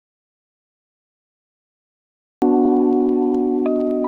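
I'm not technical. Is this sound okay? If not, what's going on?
No. The sound has two faults. First, an audio dropout to silence runs from the very start until 2.42 s. That stretch is dead silent, with not even the faint background hiss a quiet room leaves. That tells it apart from a natural pause. The input was likely lost and blank audio was recorded instead.

Second, there are repeated frames at about 2.65 s. A tiny 40 ms piece plays twice in a row, giving a quick stutter or blip. Unlike the dropout, nothing goes missing here. A sliver simply repeats, making the clip 40 ms longer.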